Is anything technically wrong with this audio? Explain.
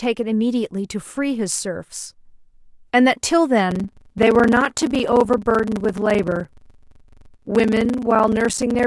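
Yes, from 3.68 s to the end, the speech has a block size mismatch (padded). Each block falls short of a size consistent with 1,024 samples and is filled with silence, producing a steady 23.4 Hz buzz and delivery slowed to 0.861 times normal at unchanged timbre. Random dropouts would not buzz this regularly.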